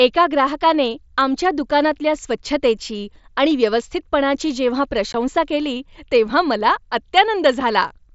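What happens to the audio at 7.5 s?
Nothing goes wrong at 7.5 s; the speech carries on intact through that moment, with only the light graininess of the Bluetooth mSBC headset link that runs under the whole clip.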